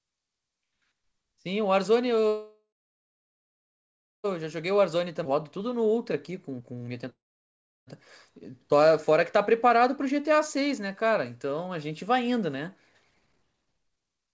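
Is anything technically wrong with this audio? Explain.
Yes. This speech has three kinds of fault.

Call audio freeze, at 2.28 to 4.27 s and 7.10 to 7.90 s: packets were likely delayed and the jitter buffer ran dry, so the last sound is extended and fades. About 1.6 s of the first gap and 0.7 s of the second is silent. Speech then resumes where it stopped, so nothing is lost, but everything after runs late.

Jitter buffer speed-up, at 4.56 to 7.05 s and 13.10 to 14.33 s: after the first freeze, the receiver trims short pitch-period slices to work off the excess delay. Pitch stays the same while pace rises to 115%, losing roughly 0.4 s. The final stretch is rushed to 167%, losing roughly 0.7 s.

Skip ahead, at 5.24 to 5.28 s: during the first speed-up, roughly a second of speech is dropped and the two sides are joined with only a 9 ms bridge. The speech jumps forward abruptly.

Through all of this, nothing is heard above 8 kHz, which fits a wideband call codec such as G.722.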